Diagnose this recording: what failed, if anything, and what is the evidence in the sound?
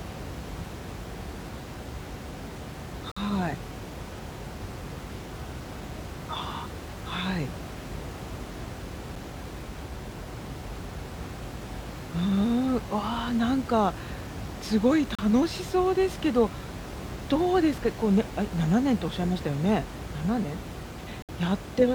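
Gaps between stream segments at 3.12 to 3.17 s, 9.16 s, 15.15 to 15.19 s and 21.22 to 21.29 s: hard-edged silences of about 5 to 64 ms, spaced about 6 s apart, each cutting cleanly through the room noise about 12 dB below the speech. This is a playback-stage fault. The time stamps of consecutive 6-second segments leave small holes that the player fills with silence, so nothing is lost.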